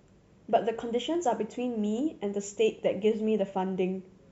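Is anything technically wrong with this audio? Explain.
Yes, there are two small clicks in this speech, at 1.15 s and 1.99 s. Each is a single sharp tick with a thin vertical line across the spectrum, too brief to take anything out of the speech. The likely cause is dropped samples: a handful of samples, around a tenth of a millisecond, missing from the stream, so the waveform jumps straight to a later value. That sudden step is what you hear as the click.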